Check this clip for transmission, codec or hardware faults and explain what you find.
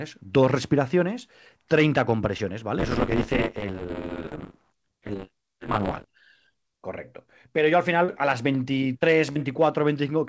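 Two faults are audible in this speech clip: short concealed packet loss at four points, and a stretch of buffer tearing. The audio is band-limited with nothing above 8 kHz, which fits a G.722 wideband call at 64 kbps.

Short concealed packet loss occurs at 2.38 s (20 ms missing), 4.29 to 4.33 s (20 ms), 8.05 to 8.10 s (40 ms) and 9.32 to 9.39 s (40 ms, with roughly 15 ms added). Audio arrived too late, and the receiver extended the preceding sound before crossfading back. Each is a brief isolated smear or wobble, unlike tearing's sustained buzz.

Buffer tearing runs from 2.78 to 6.06 s. The writing and reading sides of the audio buffer cross each period, so roughly a third of every buffer repeats audio from about 20 ms earlier, with hard joins. The result is a continuous robotic buzz at 100 Hz, present only while sound plays, unlike the isolated gaps from packet loss.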